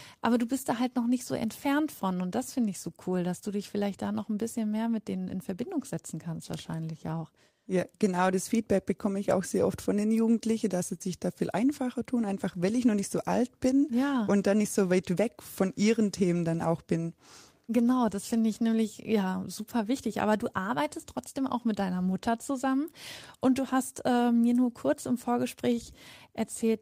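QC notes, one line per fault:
No faults found.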